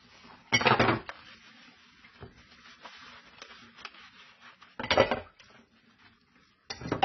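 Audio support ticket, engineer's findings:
Dull, band-limited sound for the whole clip, with nothing above 6 kHz. Heavy smearing and a warbly, fizzy texture on sustained parts, with gaps in the spectrum where detail should be. Likely AAC compression (AAC-LC) at a very low bitrate, roughly what you'd get around 16 kbps. The encoder drops the cut-off and starves or noise-fills bands to fit its budget, so the top end is gone and everything sounds papery.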